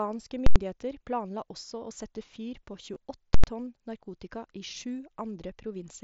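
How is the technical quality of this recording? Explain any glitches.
The recording has two kinds of glitch: two loud full-scale bursts and one brief concealed dropout, all heard through a wideband Bluetooth headset link whose slight graininess on louder syllables comes from the mSBC codec.

Invalid numbers at full scale, at 0.46–0.56 s and again at 3.34–3.44 s: a processing stage produced infinite or invalid values, which were clamped to maximum level for a whole block of about 93 ms, consistent with a 4096-sample block. Each burst is a sharp, very loud pop at either end with nothing audible between.

Concealed Bluetooth headset packet loss, at 2.94 s: a short run of headset packets, about 15 ms worth and likely two frames, never arrived. The receiver filled the gap by repeating the best-matching recent stretch of waveform, leaving a brief buzzy smear and a slight warble as the real audio resumes.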